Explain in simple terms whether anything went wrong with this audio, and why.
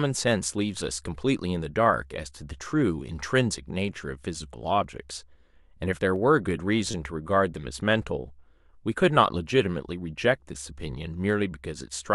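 Two things went wrong in this speech clip. First, dropped samples: the stream most likely lost a tiny sliver of audio, about a fifth of a millisecond, at 4.84 s and again at 6.16 s. Each gap makes the waveform jump abruptly, which you hear as one sharp click.

Second, repeated frames: at 6.91 s a short stretch of compressed audio was played again, adding about 26 ms. That fits three blocks of 8.7 ms each being repeated, and it sounds like a quick stutter.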